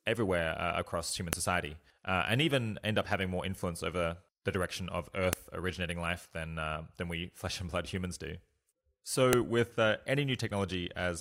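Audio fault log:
1.33, 5.33 and 9.33 s: file header played as audio. A sharp, loud click lands every 4.0 s: between "everywhere uh across human" and "society uh and even", after "over the direction of", and before "with uh". The 4-second pieces were joined with their WAV headers left in, so those header bytes play back as samples.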